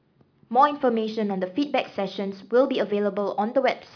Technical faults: none

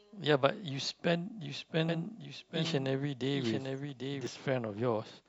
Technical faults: doubled audio track

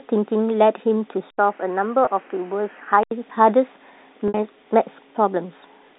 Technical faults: input switched to a poorer device; packet loss with pitch repetition

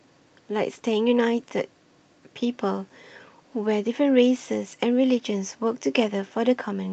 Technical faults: none

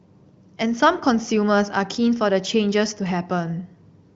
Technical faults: none

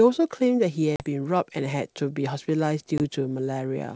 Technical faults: packet loss on an ADPCM call

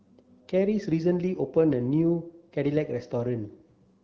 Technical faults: none

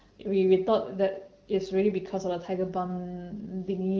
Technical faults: none

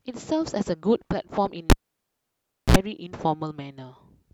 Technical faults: cable pulled and plugged in

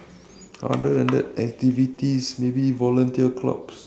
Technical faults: clock drift between sender and receiver; short stall from a late packet; repeated timing corrections

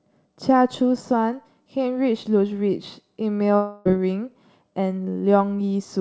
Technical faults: long network dropout

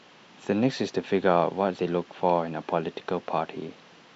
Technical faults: none

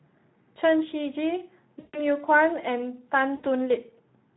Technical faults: Speex codec; VoIP packet loss concealed by the speech codec

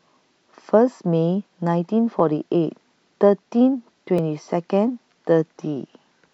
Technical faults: periodic USB or driver dropouts

